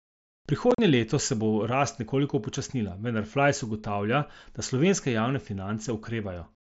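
From 0.71 to 0.79 s, just before "leto se bo rast", there is unconcealed Bluetooth headset packet loss over the mSBC wideband link. About 45 ms of speech is missing across a 75 ms stretch, with the longest gap 37.5 ms, which fits several consecutive headset frames dropped between headset and phone. Nothing was reconstructed to fill them, so the speech cuts to silence or an idle pattern in short holes with abrupt edges before the phrase resumes.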